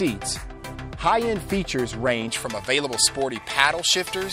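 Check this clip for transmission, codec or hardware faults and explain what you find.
One fault is present: pre-emphasis left on, from 2.28 s to the end of the clip. The high frequencies were boosted for recording or transmission, and the complementary de-emphasis was never applied on playback. The tilt reaches about 11 dB at 10 kHz relative to 1 kHz, which fits a J.17 pre-emphasis curve. From 2.28 s onward the audio sounds thin and bright, with its top end pushed well forward of the midrange.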